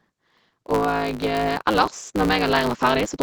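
A block size mismatch (truncated) runs throughout: each block, likely 512 samples, loses its tail, leaving a 109 Hz buzz and speech running 1.16 times fast at near-normal pitch. From 0.66 s to the end, automatic gain rising steadily lifts the level, so speech and background swell together as the gain control compensates for quiet input.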